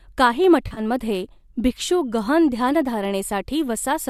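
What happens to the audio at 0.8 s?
Around 0.67 to 0.80 s the speech hits AAC frame loss with concealment. About 70 ms of frames go missing, scattered over 100 ms with the longest gap around 40 ms. The decoder patches each gap from the last good spectrum, so you hear brief smeared, phasey blurs rather than the clean silent holes of a plain dropout.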